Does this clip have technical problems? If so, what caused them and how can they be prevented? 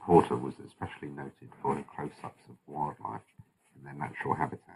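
Yes. Channel delay (comb filtering) runs through the whole speech clip: one channel arrives a fraction of a millisecond late, which fits an offset of only a few samples, and folding the pair to mono cancels their shared content at evenly spaced frequencies, the first near 7 kHz. The top end sounds dull and phasey. A spectrogram shows a steady dark notch band around 7 kHz across the clip. Aligning the channels before any mono sum prevents it.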